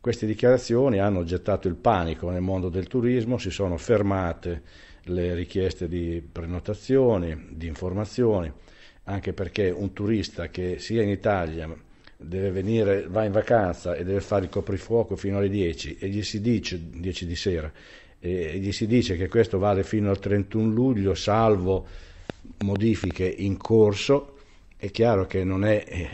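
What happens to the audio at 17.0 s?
Nothing goes wrong at 17.0 s; the audio runs on intact through that moment with no dropout, click or other fault.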